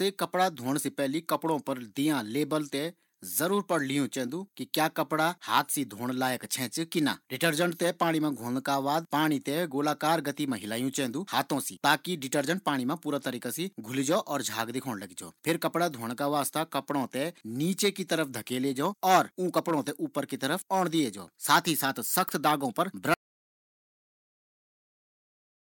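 Audio dropout to silence begins at 23.14 s, just after "दाग पर", and runs to the end of the speech clip. The input was likely lost while recording continued, so the last 2.5 s are silent with no room tone, and whatever followed is gone.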